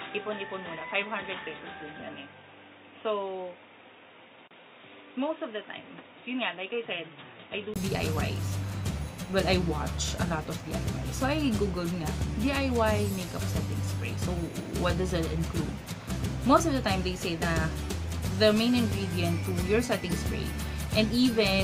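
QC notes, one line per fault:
0.0–7.76 s, input switched to a poorer device: dull and boxy, nothing above 3.8 kHz, about 10 dB quieter, 20 ms gap at the switch; likely a narrower-band microphone.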